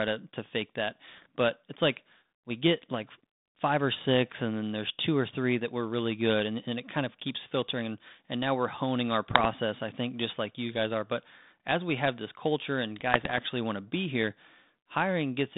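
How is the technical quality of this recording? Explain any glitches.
Three short glitches mar the recording, all bit errors on an ADPCM link, heard over a narrowband 150 Hz to 3.7 kHz sound that fits G.726 ADPCM at 32 kbit/s. They fall at 1.08 to 1.26 s after "to to fake that", at 9.31 to 9.46 s between "now we're honing our" and "i think just like", and at 13.12 to 13.41 s between "have this culture and" and "want to be here". Stray bits, under one percent, corrupt the decoder's step size and prediction, so each error keeps ringing briefly, heard as pops and rough bursts with jumpy level.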